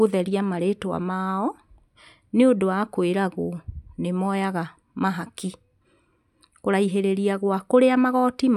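No technical faults can be heard anywhere in the speech. Nothing in the audio calls for a time-stamped note.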